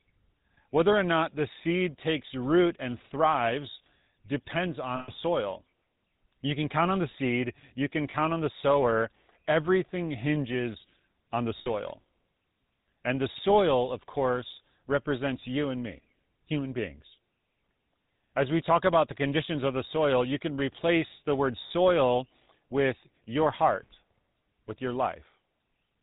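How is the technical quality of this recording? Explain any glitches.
The quality is rough throughout, since the whole thing has gone through a GSM full-rate codec, and there are four short dropouts on top of that.

The GSM full-rate codec damage is plainly audible for the full length, with the buzzy, gravelly character that fits the old 13 kbps full-rate scheme. It models the voice as a filter driven by a sparse, regularly spaced pulse train, so the fine texture of the speech gets replaced by that grainy buzz. Nothing above 4 kHz comes through, which leaves everything dull and band-limited.

The lost GSM frames are at 4.96–5.10 s right after "root and thrives depends", at 8.10–8.15 s between "the seed you can" and "on the sower", at 11.58–11.67 s after "hinges on the", and at 21.68–21.71 s. When frames go missing, the decoder reuses the last good frame's settings, with the level falling from the second lost frame on. 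You hear that as a brief metallic, ringing hold instead of a gap. The longest, at about 120 ms, fits roughly six lost 20 ms frames.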